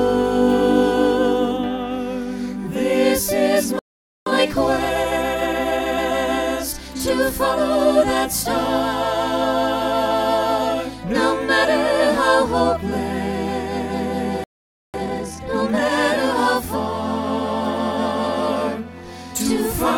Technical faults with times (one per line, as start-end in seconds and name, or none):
3.79-4.26 playback stall
4.26-6.14 time-compressed catch-up
14.44-14.94 playback stall
14.94-15.92 time-compressed catch-up